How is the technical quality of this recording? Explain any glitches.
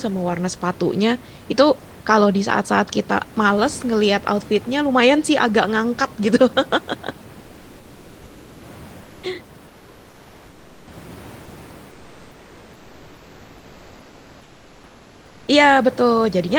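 The quality is marred by comfort noise in place of the background during three pauses: 9.03 to 9.23 s, 9.67 to 10.87 s, and 11.91 to 15.47 s. The natural room noise, about 24 dB below the speech, vanishes there. A steady, featureless hiss takes its place, about 1 dB quieter in the first gap and about 3 dB quieter in the other two. This is likely discontinuous transmission in the Opus codec: sending pauses, and the receiver synthesises noise instead. Unlike a noise gate, the gaps never fall to true silence.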